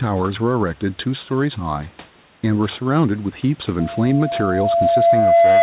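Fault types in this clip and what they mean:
Gain pumping: The room noise sits about 36 dB below the speech, with the level shifting by roughly 5 dB throughout. That pumping points to a likely cause of microphone gain set far too high, with a fast limiter or compressor clamping down on every loud moment, so loud and quiet parts get squashed closer together.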